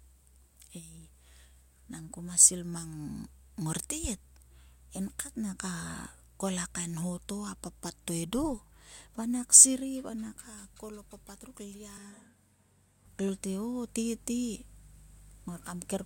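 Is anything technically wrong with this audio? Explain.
Yes. From 11.98 to 13.05 s, right after "kol a papat ruk", the speech switches to a distant microphone. It turns roomy and hollow and loses bass at the same level, with room noise about 35 dB down. This is likely a failed close microphone leaving a farther one, and both transitions are abrupt.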